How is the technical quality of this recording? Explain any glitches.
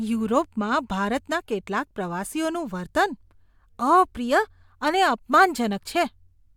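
No glitches can be heard.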